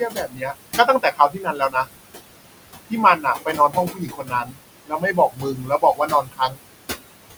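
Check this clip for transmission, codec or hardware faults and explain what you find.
Two related faults come from the noise suppressor working on room noise that sits about 12 dB below the speech.

Noise suppressor artifacts run throughout the clip. The suppressor pulls down every band it judges to be steady noise by about 20 dB, frame by frame. The background therefore drops away in pauses and swells back under the speech.

Speech cut by the noise suppressor occurs at 0.0–0.59 s, 0.76–1.92 s, 3.17–4.63 s and 4.86–6.71 s. In these spans the suppressor mistook parts of the speech for noise and turned them down by about 21–22 dB. Within each span, roughly half a second to a second of softer sounds and endings comes out swallowed and faint.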